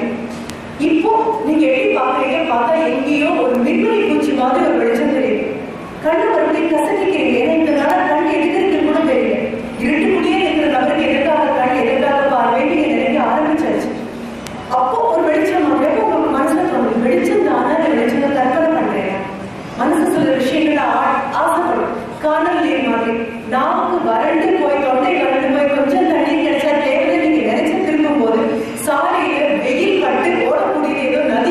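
Five sharp, isolated ticks land at 0.50, 3.55, 7.90, 14.47 and 15.85 s, broadband and unrelated to the surrounding audio. These are bit error spikes: a flipped bit throws one to three samples off by a power of two before they snap back.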